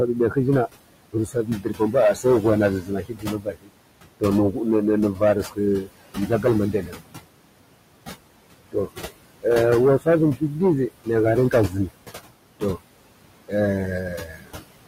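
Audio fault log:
throughout: hard clipping. The level is pushed about 11 dB past what the signal path can pass, so roughly one sample in twenty is cut off at the limit. Every loud syllable gets a harsh, fuzzy edge rather than occasional crackle. On the waveform the peaks are sliced into flat plateaus at the same height on both sides. On the spectrogram each loud syllable carries vertical smears of added harmonics reaching well up into the high kHz range.
throughout: noise suppressor artifacts. The room noise sits about 13 dB below the speech, and the suppressor pulls it down by about 21 dB wherever it judges a band to be noise. The background drops away between phrases and swells back under them. On the spectrogram the gaps look almost empty, with scattered flickering specks, and a faint noise floor reappears beneath each phrase.
1.13–4.57, 5.13–7.25, 10.0–10.42, 11.04–11.92, 13.48–14.71: speech cut by the noise suppressor. 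Within these spans the suppressor mistook parts of the speech for noise. Soft consonants and word endings are pushed down by up to about 22 dB in the first, second and last spans, about 17 dB at 10.0 and about 20 dB at 11.04. They sound swallowed. This adds up to around a second in each of the first two spans and shorter stretches later. The spectrogram shows ragged holes in the high-frequency consonant energy, and the waveform shows syllable tails tapering abruptly.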